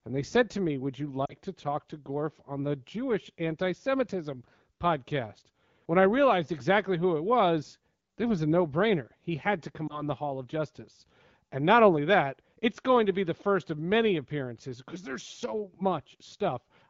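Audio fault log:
1.25–1.33 s, lost AMR speech frames: just before "to talk to", about 40 ms of speech, roughly two 20 ms frames, is replaced by the decoder's guess. It repeats the last good pitch and vocal tract settings at falling gain, so the sound fades toward near silence within the two frames. On a spectrogram the harmonics flatten into horizontal streaks that fade, and the waveform envelope sags before the speech returns weak or rough.
9.87–10.08 s, lost AMR speech frames: right after "had to", a single concealed frame produces a brief dip and a roughened restart as the gain recovers. The spectrogram shows a momentary frozen, dimming harmonic pattern, and the waveform shows a small notch in amplitude.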